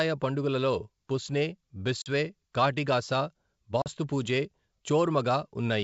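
At 2.02 to 2.09 s and again at 3.82 to 3.87 s the speech drops into sharp-edged silence, each hole consistent with about 40 ms of audio, or a couple of packets, lost on this ADPCM call. Because the receiving decoder's adaptive predictor and step size drift from the sender's during each gap, the speech resumes with brief distortion that settles over some tens of milliseconds. The wideband G.722 coding around these holes stays clear.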